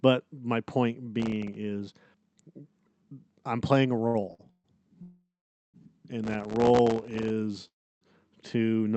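Processor overload crackle cuts into this speech clip from 1.20 to 1.56 s, just after "my point", and again from 6.24 to 7.30 s. Very short buffers, around a millisecond and a half each, miss their deadlines in quick succession, and each miss drops to silence, giving a hard-edged gritty tearing. Repeated stalls (stutter) follow from 4.07 to 4.66 s, after "I'm playing a": packets run late, the jitter buffer empties five times, and the last sound is stretched across 267 ms, with the longest gap 134 ms. Nothing is lost, but the phrase drags and stammers. A call audio freeze from 5.02 to 5.76 s holds the sound for 717 ms, fading to about 480 ms of silence before resuming, likely from packets held up in transit. A second, from 7.68 to 8.03 s just before "to not", fills 336 ms, 310 ms of it silent. The Opus call path's 8 kHz band limit sits under all of this.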